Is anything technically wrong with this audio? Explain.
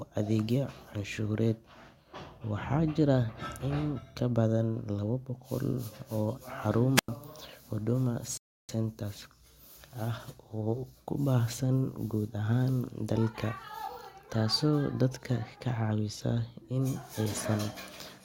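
Yes. The speech has two separate technical faults, close together in the first half.

From 6.95 to 7.08 s there is a wireless microphone squelch dropout. The radio link from an analogue FM microphone weakened. The receiver's squelch then shut the output off rather than pass raw noise. You hear hiss or static swell briefly. Then comes a hole of near silence lasting about 94 ms. The voice returns after it.

From 8.37 to 8.69 s there is a rebuffering stall. The player used up its downloaded audio and paused until more data arrived. The speech cuts cleanly to silence, with no hiss. It then resumes exactly where it stopped. Nothing is skipped or repeated. The pause adds about 316 ms to the running time.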